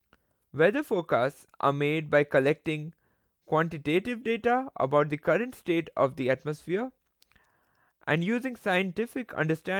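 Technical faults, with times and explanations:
No technical faults are present.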